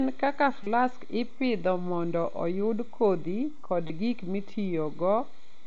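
Concealed Bluetooth headset packet loss occurs at 0.63–0.67 s, before "ipidho mondo oyud kodhi", and at 3.87–3.90 s, after "mondo oyud kodhi kod". The receiver fills the 30 ms and 22.5 ms gaps with repeated recent waveform, heard as brief buzzy tone and slight warble.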